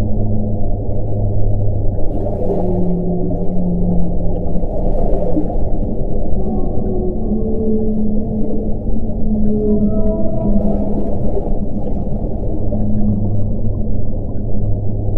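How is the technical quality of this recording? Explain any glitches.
Listening through the recording, nothing stood out as a technical problem.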